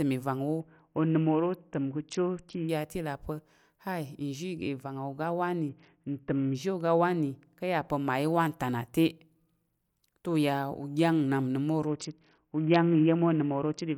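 From 0.60 to 2.69 s the Bluetooth link comes under pressure and the phone cuts the SBC bit pool, which fits a drop from 31 to about 6, near 55 kbps. Starved of bits, the encoder gives the upper sub-bands almost nothing and quantises the rest coarsely, so the speech turns dull at the top while a gritty, grainy noise rides over it.

From 4.58 to 7.88 s, ending just before "pa̱ mmayi wanta na", a de-emphasis filter is wrongly applied. The response tilts down smoothly, reaching about 8 dB lower at 10 kHz than at 1 kHz, and the speech sounds muffled and veiled. Inside that stretch, from 5.69 to 6.55 s, the same SBC bit pool drop returns, adding graininess to the already dulled top end.

The bit pool drop occurs once more from 11.87 to 13.97 s, running to the end of the clip with the same loss of treble and gritty texture.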